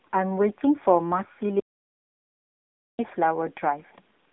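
Right from the start the whole thing sits behind AMR narrowband mobile coding: nothing above 3.6 kHz, a thin band from about 200 Hz up, and a plainly buzzy, synthetic edge to the speech. That level of damage fits a low bitrate, somewhere near 8 kbps. Then at 1.6 s the audio drops out to dead silence, with no room tone at all, until it cuts back in at 2.99 s, roughly 1.4 s gone. The likely cause is lost input, with the recorder writing silence through the gap.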